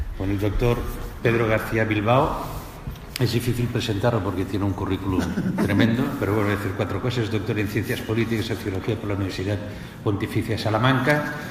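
A short audio clip with compressed frames skipped at about 9.29 to 9.32 s. Roughly 40 ms of audio goes missing, which fits two 20 ms frames being lost or rejected. At that point the audio jumps ahead by the length of the missing frames.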